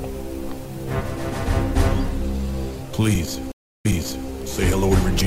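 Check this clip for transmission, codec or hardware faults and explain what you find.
Two faults are present.

Channel delay (comb filtering) runs from 0.98 s to the end. One channel lags by about one sample before a mono sum, so cancellation begins near 20 kHz and dulls the top treble.

A stream reconnect occurs between 3.52 and 4.29 s. The sound drops out for 316 ms, then resumes 456 ms earlier with a fresh decoder, repeating a short stretch.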